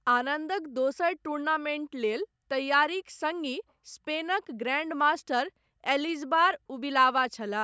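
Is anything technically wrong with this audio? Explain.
No, nothing in this speech recording stood out as a technical problem when listening to it.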